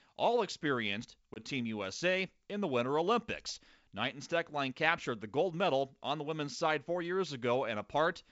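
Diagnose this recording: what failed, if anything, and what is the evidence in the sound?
The fault sits at the network stage: packet loss on an ADPCM call. At 1.34 to 1.38 s the speech drops to a hard-edged 20 ms silence, about one packet's worth, in the G.722 stream. The decoder's predictor and step size then lag the sender's, so the speech re-enters slightly distorted and must resettle.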